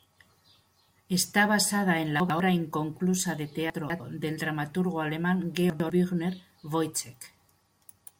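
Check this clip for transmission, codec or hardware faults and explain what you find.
Two faults are present: constant sample clock jitter and three spots where chunks play out of order.

Sample clock jitter, throughout: the converter clock wanders by a microsecond or two, mistiming samples and leaving a hiss roughly 35 dB below the speech that swells on loud, bright sounds.

Chunks out of order, at 2.2 to 2.4 s after "basada en", 3.7 to 4.0 s after "inconclusa de", and 5.7 to 5.9 s after "del dramaturgo alemán": 100 ms blocks play one or two places late, producing a jumbled stretch at each spot.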